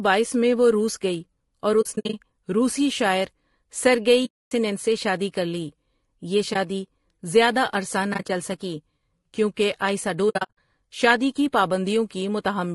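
Throughout, the speech sounds rough and grainy, with noise filling the gaps between harmonics, likely from low-delay AAC compression (AAC-ELD) at 32 kbps.

Soft-edged silences that fade out and back in come from AAC frame loss with muting: the decoder zeroed the missing frames. They fall at 1.81 to 2.14 s as several broken gaps before "روسی شاعر", at 4.25 to 4.52 s as one solid hole before "سے شادی کر لی", at 6.53 to 6.56 s as a brief dip, at 8.13 to 8.30 s as short scattered gaps, and at 10.29 to 10.57 s as broken gaps between "سکی کیونکہ آئسا" and "شادی کی".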